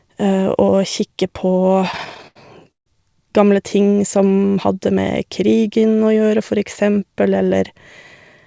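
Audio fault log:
1.92–2.88 s, repeated stalls (stutter): packets reached the jitter buffer late, so it ran dry twelve times. Each gap, the longest 149 ms, was bridged by extending the last sound, about 320 ms in all, roughly a third of the span. Nothing is lost, but delivery drags and stutters.
4.17–4.41 s, jitter buffer slow-down: with its reserve low, the buffer repeated single pitch periods to build delay back up, adding 41 ms. This stretch plays at 86% speed with unchanged pitch, so sounds are drawn out. Bandwidth stops at 8 kHz, consistent with the G.722 call codec.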